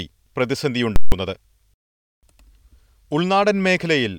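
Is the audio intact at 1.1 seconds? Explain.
No. From 0.96 to 1.12 s, a 160 ms block of invalid numbers at full scale replaces the speech: infinite or invalid values were pinned to the maximum, giving a very loud pop at each edge with nothing between, unlike a plain dropout, which stays silent.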